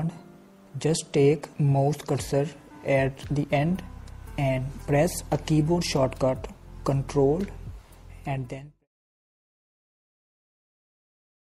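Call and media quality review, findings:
MP3 compression, throughout: watery, swirly texture, likely from coding at a low bitrate such as 64 kbps, where weak frequency lines drop in and out between frames. Fade-out from about 8 s to 8.88 s.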